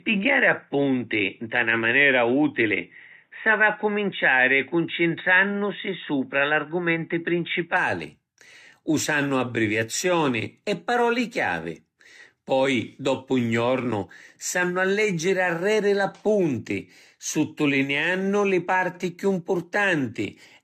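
From the start up to about 7.77 s the speech sounds narrow and boxy, with nothing above 3.8 kHz, then opens up with no gap and no jump in level. That's likely an input switched to a poorer device, with its faint extra noise sitting very far down.

Across the whole clip there's also generation loss: swirly, hollow smearing, blurred consonant attacks, and a ceiling at 14 kHz. The likely cause is the audio being re-encoded around seven times, which fits a chain of 64 kbit/s AAC-LC passes stacking up their noise.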